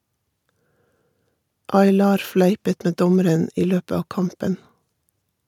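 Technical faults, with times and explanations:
No technical faults are audible anywhere in this speech recording.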